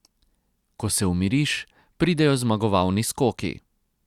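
No technical faults can be heard anywhere in the recording.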